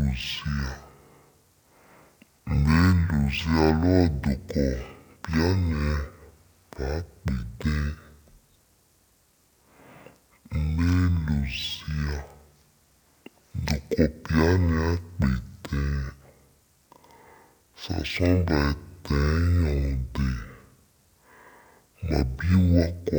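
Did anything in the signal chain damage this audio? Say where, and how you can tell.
Yes: stereo read as mono at format conversion. Speech plays half speed, an octave low, plus a faint upper-spectrum mirror image, unlike mere slow playback.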